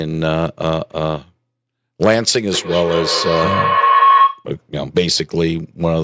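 Speech from a call, with a feedback howl from 2.51 to 4.5 s. Two devices in one room share the call, so each pass through microphone and loudspeaker adds level. A tone around 1 kHz builds to about 6 dB above the speech. The loop comes round roughly every fifth of a second. The call audio tops out at 8 kHz.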